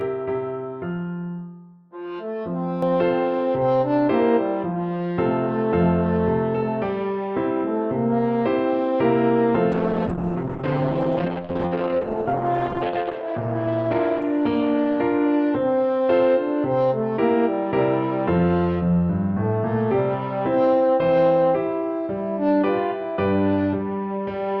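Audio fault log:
0.00–2.83 s, channel delay (comb filtering): One channel trails the other by around 10 ms, and the mono sum cancels at evenly spaced frequencies starting near 50 Hz. The result is a hollow, phasey tone. Unlike a plain treble loss, the notches stay fixed and repeat across the whole spectrum.
9.72–24.6 s, call bitrate drop: The encoder falls from 40 to 8 kbps, staying at its lowest for 3.73 s, and the audio bandwidth shrinks from 20 kHz to 6 kHz. The sound turns muffled and watery. Unlike a simple filter, the coarse, smeared coding texture comes with the lost treble.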